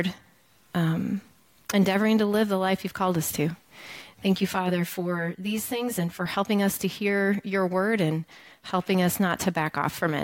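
From 4.02 to 6.26 s, channel delay causes comb filtering. One channel lags by roughly 10 ms, so mono summing notches evenly from about 50 Hz, sounding hollow and phasey.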